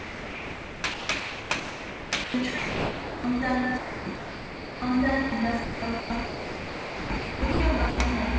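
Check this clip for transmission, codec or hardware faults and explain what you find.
Two kinds of voice-detector fault run through this recording of everyday sounds, both heard as real sound giving way to synthetic background noise. The call path, which sounds like G.722 at 64 kbps, shows nothing above 8 kHz on a spectrogram.

Sound chopped by the voice detector occurs from 0.00 to 3.24 s, from 3.78 to 4.82 s and from 5.64 to 7.60 s. The sender's voice detector likely kept switching transmission on and off, and the receiver filled each gap with comfort noise. About 2.6 s, 0.9 s and 1.4 s of sound were lost across those stretches. The audio turns choppy. On a spectrogram, detailed sound texture alternates with smooth, featureless noise bands. The waveform shows lively segments interrupted by flat, even-textured fill.

Sound dropped by the voice detector occurs from 5.30 to 5.32 s and from 7.90 to 7.98 s. 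Here the detector likely mistook quiet sound for background and stopped sending, so 20 ms and then 80 ms were replaced by comfort noise before transmission resumed. Each drop is heard as a brief hole where the sound dulls into steady hiss. On a waveform these show as short, uniform low-level patches. A spectrogram shows thin vertical strips of smooth noise cutting across the surrounding detail.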